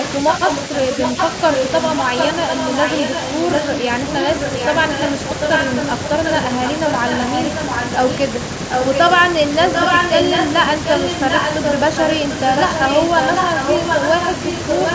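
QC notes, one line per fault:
0.31–1.32, 1.51–3.88, 4.08–5.11, 5.4–8.15 s: echo leak. A copy of the speech trails by about 745 ms, a bit quieter, likely a loudspeaker echo the far-end canceller missed.
8.71–9.01, 9.67–11.8, 11.96–14.94 s: echo leak. Same 745 ms repeat, now roughly as loud as the speech itself, likely the canceller letting even more loudspeaker pickup through.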